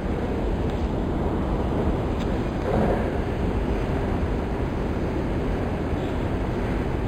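An everyday sound recording with imaging from linear upsampling throughout: material apparently sampled at about 11 kHz was interpolated to 44.1 kHz. A spectrogram shows dulled content near 5.5 kHz and faint mirrored copies above, roughly 35 dB down, giving a light metallic shimmer.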